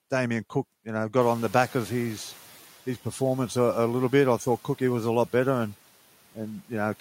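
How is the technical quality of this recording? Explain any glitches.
One glitch stands out, right after "you know": between 1.2 and 2.69 s the background noise comes through louder and then sinks back down, settling by the time "his performance a a" begins. This is the noise suppressor catching up. Just before, at around 1 s, the room noise jumps by about 18 dB. The suppressor's estimate of the noise floor lags that jump, so at first it under-reduces and lets the raised noise pass. Over roughly 1.5 s the estimate adapts and the noise drops by about 6 dB.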